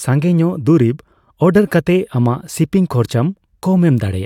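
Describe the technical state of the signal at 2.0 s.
At 2.0 s the speech signal is intact, with no audible fault at that moment.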